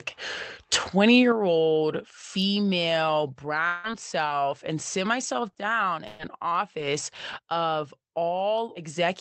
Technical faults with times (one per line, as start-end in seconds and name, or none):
1.32 microphone volume stepped down
3.67-3.87 long network dropout
3.84-3.90 lost packet rebuilt from error correction
5.23-5.59 lost packet rebuilt from error correction
6.07-6.22 burst of packet loss
6.19-6.25 lost packet rebuilt from error correction
7.15-7.39 lost packet rebuilt from error correction